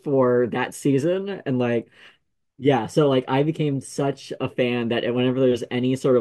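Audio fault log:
Nothing to flag here, the speech comes through without any technical trouble worth noting.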